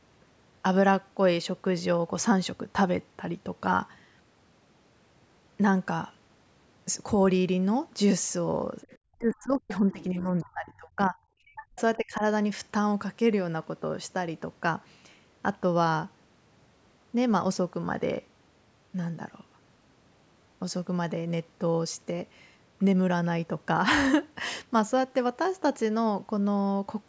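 From 8.81 to 8.98 s, a faint second voice slips in, about 25 dB below the main speech. This is the other side's voice leaking through. The far end likely played on a loudspeaker, and the echo canceller left a short scrap of it.

Right after, the speech is suppressed in double talk. The speech dips in pieces from 9.12 to 11.34 s, then at 11.53 to 11.80 s and 11.97 to 12.23 s. The deepest drops are roughly 30, 40 and 20 dB. The echo canceller likely turned down the local talker along with the echo.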